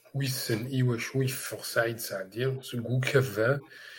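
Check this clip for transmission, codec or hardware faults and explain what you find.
Two short glitches in this speech clip: a brief chirp-like burst at 2.58–2.64 s and another at 3.58–3.69 s, both fairly quiet. This is a corrupt frame decoded: damaged bits in a couple of compressed frames were played anyway, putting energy at wrong frequencies.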